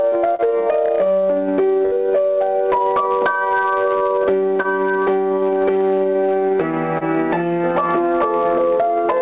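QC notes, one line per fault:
Throughout: hard clipping. The signal is driven about 6 dB past what the chain can pass, so a small percentage of samples hit the ceiling. Peaks on the waveform are sliced flat, and the spectrogram shows harmonic smear on loud moments right up to the 4 kHz band edge of the call path. It is heard as crackle riding the peaks.
0.35–0.42 s, 4.62–4.67 s, 6.98–7.04 s: short concealed packet loss. Each time roughly 30 ms of audio never arrived, and the receiver extended the preceding sound for 25 to 35 ms before blending back. The result is a brief smear or wobble. The spectrogram shows a short stretch of copied, overly regular texture with a slight seam where the real signal resumes.
1.86–1.95 s: burst of packet loss. About 60 ms of audio went missing together, and the decoder held the last sound for about 60 ms while lowering its level. This is heard as a short held buzz or fading hiss, followed by a jump forward. 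The waveform shows a decaying envelope, and the spectrogram shows frozen, repeating bands until the audio restarts.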